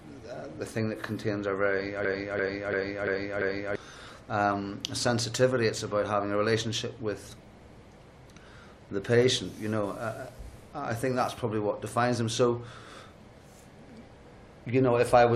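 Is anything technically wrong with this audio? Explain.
Yes. From 2.05 to 3.76 s, a piece about 341 ms long repeats exactly five times, a rhythmic stutter at roughly 2.9 Hz. This is a system hang loop: the machine froze while the sound hardware kept replaying its ring buffer, which fits a 16384-sample buffer, losing about a second and a half of audio.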